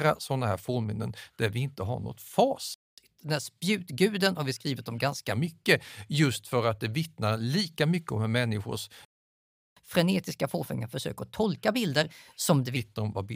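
At 2.74 s, right after "vi inte har något", the speech cuts to silence for 0.23 s in a playback stall. The likely cause is the player running out of buffered data or its thread being blocked. The speech then resumes.

From 2.98 s to 5.32 s comes catch-up at higher speed. The player works through its backlog at 1.1 times normal rate by resampling, so the speech sounds slightly hurried and about one and a half semitones higher. It then settles back to normal. Because speed and pitch rise together and then return, this is a resampling catch-up rather than a fixed pitch error.

A longer playback stall follows at 9.05 s, after "mycket om hur människors". It leaves 0.72 s of silence, likely from the same buffer starvation or blocking, and then the speech resumes.

Catch-up at higher speed then runs from 9.77 s to 12.77 s at 1.15 times speed. This is a stronger rush than the first one, raising the pitch by about two semitones before it returns to normal.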